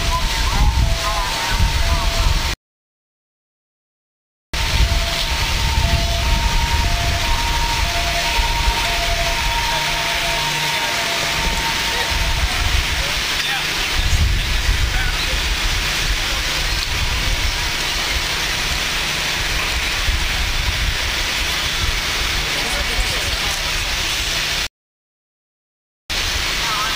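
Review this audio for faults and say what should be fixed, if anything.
Two playback stalls: the sound cuts out at 2.54 s for 2.0 s, then at 24.67 s for about 1.4 s, likely the player starving for data. Bigger buffering headroom should stop it.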